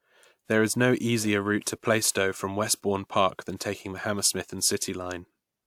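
Nothing goes wrong anywhere in this recording: the speech simply runs its course without a single glitch, dropout or disturbance to point at.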